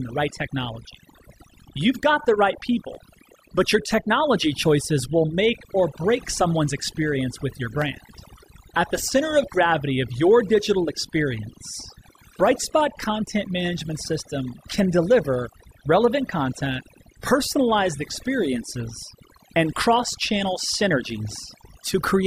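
Overdone noise removal runs throughout: a noise reducer pushed too hard pulls noisy frequency bands down or off, leaving near-silent, twinkling gaps. Sharp single clicks at 2.95 and 7.82 seconds are likely dropped samples, where well under a millisecond of signal vanished and the waveform jumped abruptly.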